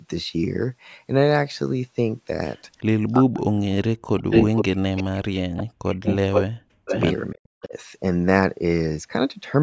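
From 3.19 to 5.58 s, and again at 6.64–6.9 s and 7.33–7.74 s, the speech ducks deeply, as much as around 40 dB, and drops out in pieces, likely speech suppressed in double talk by the echo canceller. Echo leak returns a delayed copy 468 ms late at 4.3–4.64 s, 4.98–5.03 s, 5.57–6.44 s and 6.86–7.01 s. The copy ranges from faint to about 5 dB louder than the speech, likely loudspeaker pickup the canceller missed.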